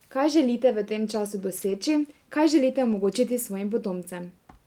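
At 1.57 to 1.75 s, after "želite v tem času", and again at 2.91 to 3.05 s, after "kaj želite", the speech turns briefly rough and noisy but never drops out. This is a lost packet rebuilt from error correction: about 100 ms, then 80 ms, were decoded from low-bitrate copies carried in following packets.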